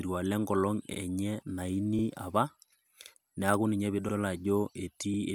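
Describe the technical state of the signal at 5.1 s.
At 5.14 to 5.19 s the signal shows an overlapping-chunks fault. The speech was handled in blocks of about 1 s, and at this join the next block starts before the previous one has finished, so roughly 50 ms of audio is played a second time. That repeated sliver breaks the waveform's continuity and is heard as a brief stutter with a click-like edge at the seam.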